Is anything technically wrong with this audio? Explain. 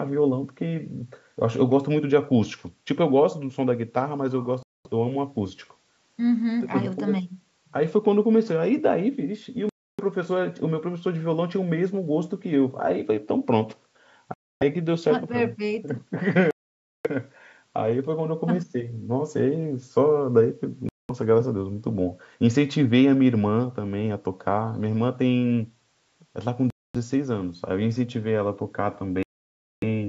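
Yes. The speech drops to silence at 4.63, 9.69, 14.34, 16.51, 20.89, 26.70 and 29.23 s, for 0.2 to 0.6 s each. These are likely Bluetooth stalls. Delayed packets emptied the headphones' buffer, so playback paused, then resumed.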